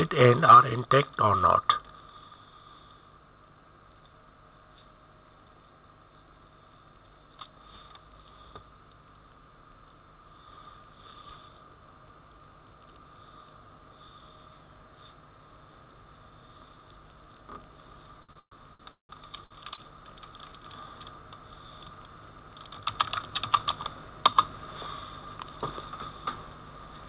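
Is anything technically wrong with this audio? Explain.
Yes, two faults. Throughout there is gain pumping: the input gain was likely set far too high, so a fast limiter keeps clamping it, making the gain swing by roughly 10 dB.

From 18.2 to 19.8 s, repeated stalls (stutter): late packets emptied the jitter buffer eight times, longest 176 ms, and the receiver stretched the last sound, so the audio drags without losing anything. Nothing above 4 kHz, which fits a narrowband call codec.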